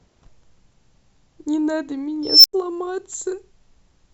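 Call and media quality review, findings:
Unstable filter, 2.23–2.53 s: a tone around 5 kHz swells over 0.21 s and clips. Recursive stage diverges, overflows, then goes silent for 0.09 s until reset.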